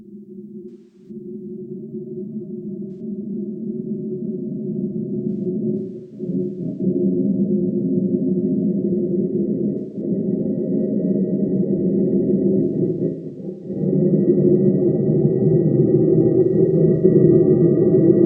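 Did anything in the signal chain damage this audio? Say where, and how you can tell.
Yes, at the codec/network stage: AAC frame loss with concealment at 0.69–1.10, 2.91–3.00, 5.30–6.82, 9.78–10.01, 12.64–13.85 and 16.44–17.03 s. Those stretches go smeared and phasey as the decoder recycles the last good spectrum; the early gap, about a third of a second, starts sinking toward silence.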